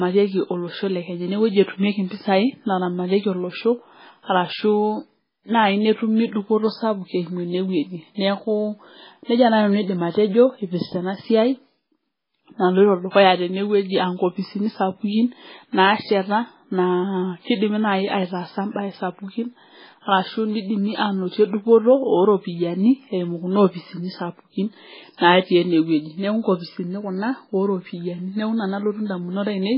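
Speech runs with nothing above 5.3 kHz and a watery, swirly texture throughout. This is likely heavy MP3 compression, which fits a very low bitrate around 16 kbps.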